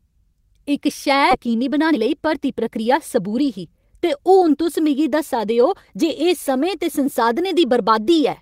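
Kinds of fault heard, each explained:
skip ahead: At 1.31 s the speech jumps abruptly forward, with no silence or fill at the join, so the sound on either side is spliced almost directly together and a chunk of roughly 0.7 s never plays. A stretch of packets was discarded, either lost in transit or thrown out by an overflowing jitter buffer while later audio was already queued, so playback resumed from the newer material and the delay dropped by about the same amount.
jitter buffer speed-up: From 1.47 s to 4.37 s the speech runs noticeably quick, about 110% of normal speed, sounding hurried while its pitch stays unchanged. The receiver's jitter buffer was holding more audio than its target, so it trimmed many short slices of one or a few pitch periods in succession. Across this stretch that removes around a third of a second, tightening the timing to bring latency back down.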